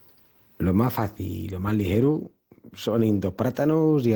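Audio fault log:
No faults are audible anywhere in this speech recording.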